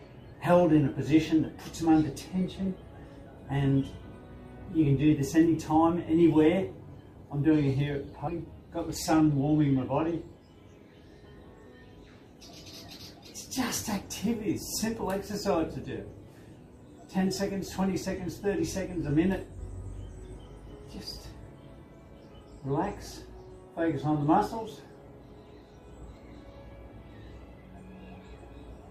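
At 8.27 s there's a skip ahead: roughly a second of audio got dropped while later material was already queued, so playback just jumps forward with almost no seam. Then from 8.88 to 9.49 s the jitter buffer speed-up kicks in, trimming tiny pitch-period slices to run about 8% fast, same pitch, shaving off around 50 ms.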